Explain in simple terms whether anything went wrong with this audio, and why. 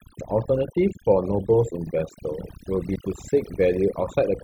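Something did go wrong: overdone noise removal, heard across the whole recording. A noise-reduction tool set too aggressively shut off narrow frequency bands it mistook for background noise, taking quiet parts of the speech with them. The result is near-silent gaps with twinkling specks.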